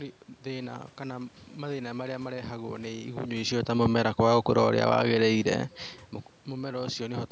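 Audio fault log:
No faults found; the level shifts around 3 s and 5.5 s are the talker moving relative to the microphone, the background noise belongs to the room, and the absence of content above 8 kHz comes from the call's microphone processing.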